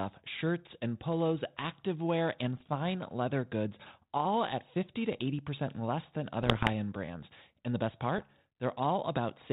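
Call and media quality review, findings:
Bit errors on an ADPCM link: three bursts of pops and rough crackle with brief level jumps. First at 2.60–2.68 s, between "and polos activewear and" and "leather goods all at". Worst at 6.41–6.69 s, after "less than", before "end brands". Last at 8.18–8.32 s, after "the best". Flipped bits throw off the decoder's step size and predictor, so each hit rings on a few ms. G.726 underneath at 32 kbit/s sounds fine, with only light codec damage.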